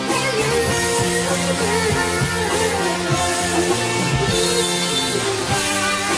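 Throughout, the audio was downsampled without an anti-aliasing filter, consistent with a drop from 48 kHz to 22 kHz. Content above 11 kHz folds back as aliasing, only about 10 dB below the signal, so high detail sounds gritty and metallic, packed hard against 11 kHz.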